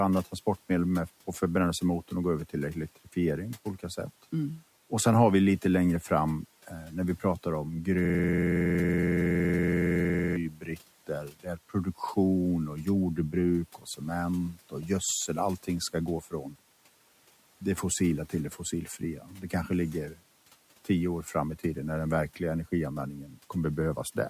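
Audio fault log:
8.05–10.36 s, system hang loop: Right after "när vi pratar om", the sound locks into a rough, rapid buzz at about 21.5 Hz that lasts just over two seconds. One 46.44 ms fragment repeats exactly, about 50 times. The system stalled while the audio hardware kept replaying the same ring buffer, and a loop that short is heard as a pitched drone rather than a stutter. Its length fits a 2048-sample buffer.
10.49–10.79 s, 11.07–12.0 s, 13.78–14.01 s and 14.54–14.74 s, speech cut by the noise suppressor: Parts of the speech sound swallowed and faint, dipping by about 11 to 12 dB. The third dip follows "och jordbruk" and the fourth comes just before "gödsel allting ska gå". The suppressor mistook these quieter stretches of speech for noise and pulled them down along with the room noise, which sits about 26 dB below the speech.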